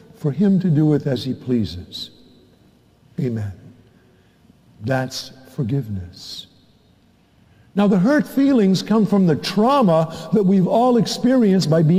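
Nothing is technically wrong with the clip, so there are no times or causes to give.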